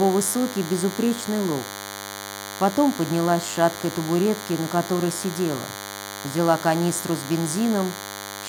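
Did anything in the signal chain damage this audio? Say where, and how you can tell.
Yes. DECT cordless phone buzz runs through the whole clip, entering at the analogue wiring stage. It is a steady, thin buzz at 100 Hz with a dense stack of harmonics, sitting only around 10 dB below the wanted sound, so it is plainly audible throughout. A nearby DECT handset or base transmits a short radio burst every 10 ms. The audio circuitry rectifies each burst, turning the pulse train into audio at that repetition rate.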